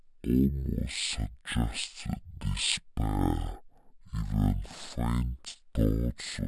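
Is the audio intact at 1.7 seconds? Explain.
No. At 1.7 seconds, as across the whole clip, the speech suffers from stereo read as mono. The left and right samples, which alternate in the file, are being played back one after another as a single channel, so each moment of sound takes twice as long to get through. The result runs at 0.5x speed and sits 12 semitones, a full octave, too low, with a fainter mirrored copy showing up in the upper half of the spectrum.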